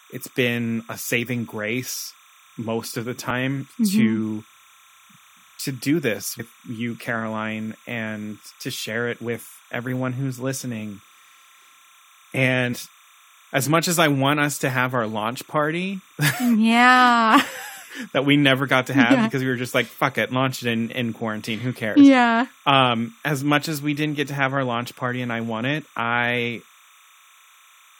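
Timecode bleed runs throughout: linear timecode leaking in as a chirping warble between about 1 and 2 kHz, roughly 30 dB under the speech, consistent with 30-frame code. Compressed frames skipped at 3.29 s after "grace most of the", 6.39 s after "to do this", and 12.72 s: the decoder drops whole 21.3 ms frames, jumping ahead by roughly 70, 100 and 100 ms.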